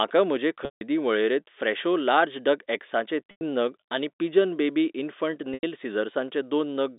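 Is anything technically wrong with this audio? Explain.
Yes. The speech has three dropouts from packet loss with pitch repetition, at 0.65 to 0.81 s (160 ms), 3.31 to 3.41 s (100 ms) and 5.54 to 5.63 s (90 ms), with gap lengths that fit 10 ms packets. When packets went missing, the receiver looped the last pitch period and faded it over roughly 50 ms. Each gap therefore begins as a brief buzzy hold, then drops to silence, and the speech returns through a short cross-fade. On a waveform, identical repeating cycles shrink to a flat line. On a spectrogram, steady horizontal harmonics fade into a blank band. All of this sits within the 250 Hz to 3.7 kHz telephone band of the G.711 coding.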